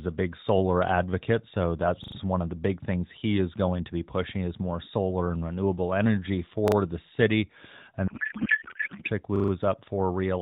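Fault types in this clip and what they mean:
Repeated buffer: The playback device ran short of fresh audio and replayed its last 40 ms piece of speech, so the same fragment sounds several times in a row with a hard join at each repeat. It happens at 2.04 to 2.16 s (three extra plays), 6.68 to 6.76 s (two) and 9.36 to 9.52 s (four). Unlike a dropout, nothing goes silent and no speech is skipped. It is heard as a brief mechanical stutter before the speech carries on.
Codec payload misread: From 8.08 to 9.09 s the AMR narrowband decoder keeps producing frames, but their bits are unpacked in the wrong layout. This points to octet-aligned AMR being read as bandwidth-efficient. The speech is replaced by garbled noise and warble that barely follows it. Light 12.2 kbps AMR coding stays attached to the speech throughout, but here the speech is swapped out entirely for about a second and then returns.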